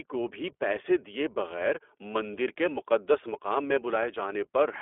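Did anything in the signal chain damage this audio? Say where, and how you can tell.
Yes. The damage is at the codec stage: an iLBC codec runs through the whole clip, coding each 20 ms frame independently. The speech is cut to a roughly 300 Hz to 3.4 kHz telephone band and sounds plainly rough and synthetic, which fits the 15.2 kbps mode.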